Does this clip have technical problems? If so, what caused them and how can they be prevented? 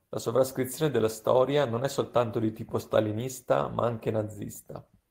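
No, the speech signal holds steady throughout with no technical faults to trace or prevent.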